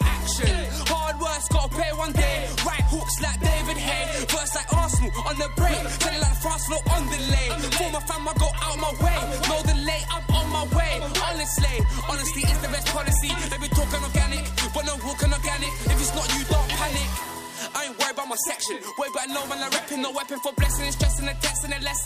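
No technical faults are audible.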